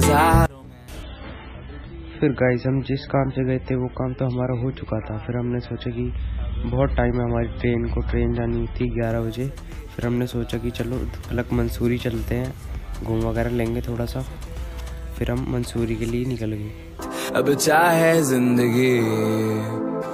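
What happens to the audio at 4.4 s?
The adaptive stream has switched to a lower-bitrate version from 1.03 s to 9.03 s because the connection slowed. The treble drops suddenly, with no gap, and nothing survives above 5.6 kHz. The heavy codec artefacts suggest a 16 kbit/s MP3 in place of 128 kbit/s.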